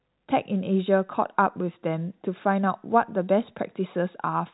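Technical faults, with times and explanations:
No technical fault is present: the speech is carried over G.711 A-law telephone coding, which limits it to the band below 4 kHz as that format always does.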